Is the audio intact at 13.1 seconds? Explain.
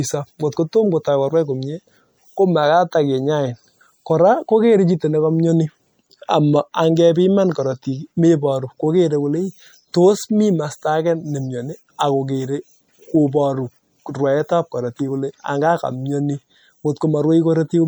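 No. At 13.1 s, as across the whole clip, the speech carries the artefacts of an earlier low-bitrate MP3 encoding. This is likely low-bitrate audio saved at a high bitrate. The sound points to a 64 kbit/s MP3 re-encoded at 256 kbit/s, which cannot restore what the first pass discarded.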